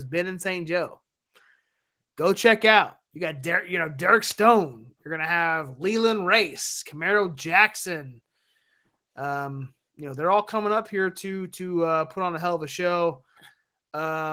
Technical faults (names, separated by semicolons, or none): none